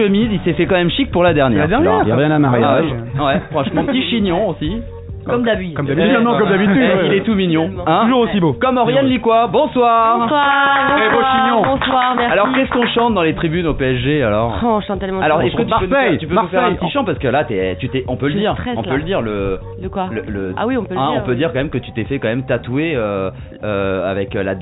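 Nothing is technically wrong with this audio, which has come through a WebRTC call path whose band stops at 4 kHz, as expected for a G.711 A-law narrowband codec.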